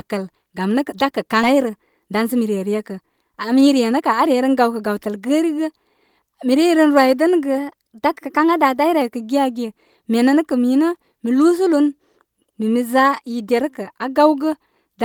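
A speech recording with three timing faults. At 1.43 s the audio jumps forward with no gap, losing roughly half a second. The two sides join almost directly. This is a skip ahead: a stretch was dropped, probably when an overfull jitter buffer discarded it while later audio was already queued. From 1.53 to 4.24 s the speech sounds hurried but keeps its pitch, running at about 108% speed. This is a jitter buffer speed-up: the receiver trimmed tiny pitch-period slices over and over, cutting around a fifth of a second to bring its delay back down. From 7.58 to 9.02 s speed and pitch rise together, by about 5.3% and nearly 90 cents, close to a semitone, then snap back. This is likely a drift correction step, where clock-matching software changed the playback rate in a single jump to rebalance its buffer.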